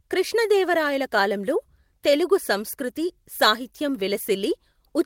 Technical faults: none

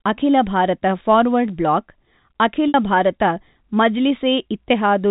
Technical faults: packet loss with pitch repetition

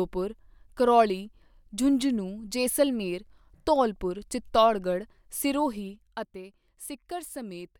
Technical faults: zipper noise

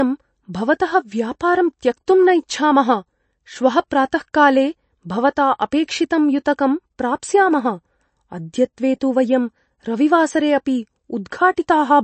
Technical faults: MP3 compression; pre-echo

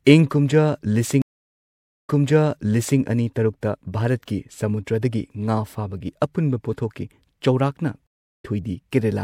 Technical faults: stream reconnect

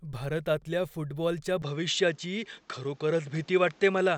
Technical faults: input switched to a poorer device

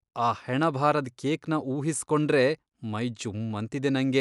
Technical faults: none

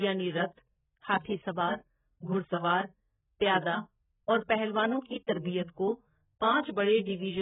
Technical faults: AAC compression

